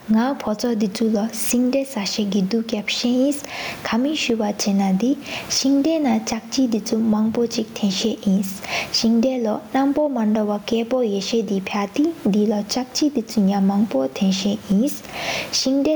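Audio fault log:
throughout gain pumping: the gain swings by around 15 dB, leaving the speech squashed; likely the gain is far too high and a fast limiter pulls it down on every peak.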